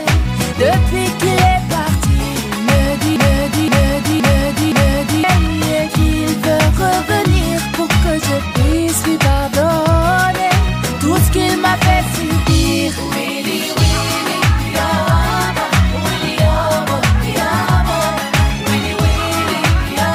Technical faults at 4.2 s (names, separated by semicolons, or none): broken-record loop